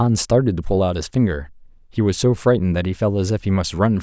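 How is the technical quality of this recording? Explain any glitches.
The recording has no technical glitches; the signal is intact and continuous, with no dropouts, interruptions or other defects to explain.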